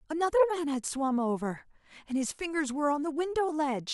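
Speech, with no technical faults heard anywhere.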